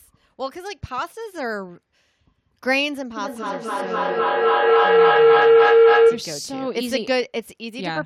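Speech clip with a feedback howl from 3.17 s to 6.37 s. A tone near 500 Hz builds steadily, with the loop repeating roughly every 300 ms, and peaks at about 12 dB above the speech level. This is a microphone-to-loudspeaker loop with gain above unity: each pass around the loop arrives louder than the last and collapses onto the frequency the loop favours. The howl persists for about 3.2 s, until the loop is broken.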